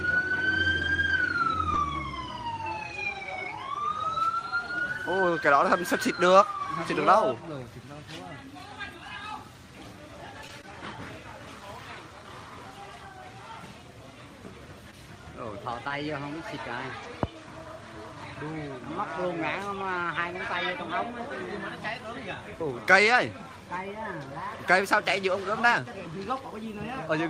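Early on, at 0.81, 1.09 to 1.22 and 1.76 s, you get a lost packet rebuilt from error correction: the next packet's low-bitrate copy fills each 20 ms, so there's no gap, just a rougher, noisier patch. The same thing turns up again at 10.49, 11.61, 15.9 and 17.04 s. Mixed in around there is short concealed packet loss at 10.48, 10.62, 14.91 and 15.88 s, where roughly 20 ms never arrived and the decoder stretched out the preceding sound to cover it, giving a brief smear or wobble.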